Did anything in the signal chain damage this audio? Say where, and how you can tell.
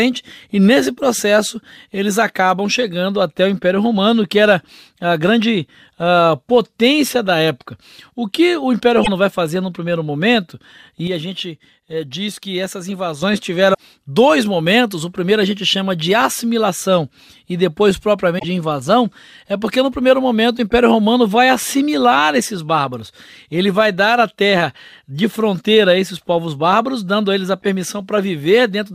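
Yes. Damaged data in the compressed stream: short glitches of under 0.1 s at 9.00 s, at 13.70 s just before "dois momentos o primeiro", and at 18.35 s between "de assimilação e depois" and "invasão é porque no". Bad frames made the decoder lose sync.

Sudden gain jump: right after "fazer no primeiro momento" at 11.07 s, the speech and background drop together by about 7 dB, snapping back at 13.22 s. That's likely a processing-stage gain change applied without a ramp.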